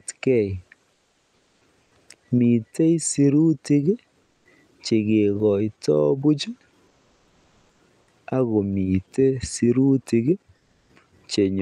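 In the pauses at 0.93–1.61 s, 1.83–1.91 s, 4.23–4.45 s, 6.87–7.79 s and 10.57–10.89 s, the real background is swapped for comfort noise, a flat, detail-free hiss about 2 to 5 dB quieter, likely from discontinuous transmission muting the sender between phrases.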